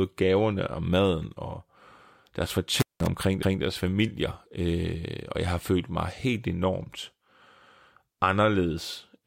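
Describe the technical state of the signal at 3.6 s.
At 3.6 s the signal sits inside an overlapping chunks fault running from about 3.43 to 3.63 s. The speech was handled in blocks of roughly 4 s, and at this join the new block began 200 ms before the previous one had finished, so that final 200 ms of speech is played a second time. The result is a brief stutter at the seam, with the repeated fragment heard back to back.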